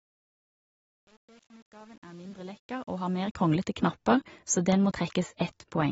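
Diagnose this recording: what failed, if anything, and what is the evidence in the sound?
Throughout the speech there is plainly audible codec damage: nothing above 7.6 kHz, with a dull, smeared texture. This points to AAC compression, likely AAC-LC at a low bitrate around 24 kbps. Band-limited lossy coding with smearing sets it apart from simple low-pass filtering.

The fade from 0.0 to 3.55 s, worst between 0.0 and 3.16 s, shows truncation distortion on a fade in the sample-format or volume stage. Gritty, stepped quantisation fits an undithered 8-bit gain stage. Grit that follows the fade level, rather than staying fixed throughout, separates it from codec artefacts.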